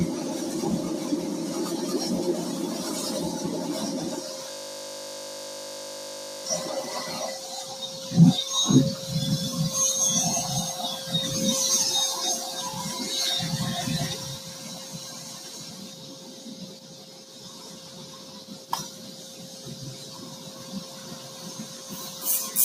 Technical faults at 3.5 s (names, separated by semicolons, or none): noise suppressor applied to music or sounds